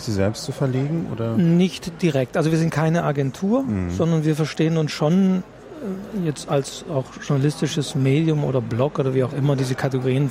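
Nothing technical stands out anywhere in this audio, so there's no fault to point to.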